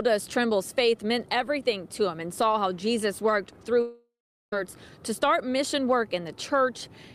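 From 3.81 to 4.53 s the sound breaks off in what is likely a long network dropout, with about 0.71 s of audio never arriving. The receiver extends the last sound as a fading buzz, then leaves about 0.41 s of near silence before the stream resumes past the lost part. On a waveform the envelope tapers into a flat line; a spectrogram shows smeared, repetitive bands decaying into an empty gap, then an abrupt restart.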